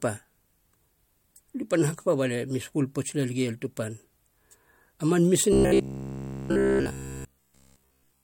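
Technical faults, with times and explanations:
5.53 to 8.24 s, robotic sound from repeated short buffers: the speech turns into a rigid, metallic buzz at about 67 Hz that runs to the end. The likely cause is a repeated 15 ms buffer filling gaps while new audio is skipped.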